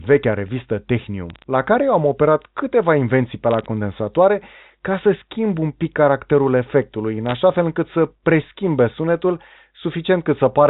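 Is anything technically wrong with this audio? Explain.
Yes. Three short bursts of bit errors on a digital phone line break into this speech. They fall at 1.30 to 1.44 s, between "vechea revistă" and "la care eu am". Another comes at 3.51 to 3.66 s, just after "câteva invenții pe". The last is at 7.26 to 7.33 s, between "pic caracterul efectului în" and "fel încât". In each burst, roughly a few bits in a thousand flip on the 8-bit logarithmic line. Each flip corrupts a single sample. The result is scattered sharp ticks, a brief crackle over speech that is itself unaltered. The line's narrow telephone band is audible throughout.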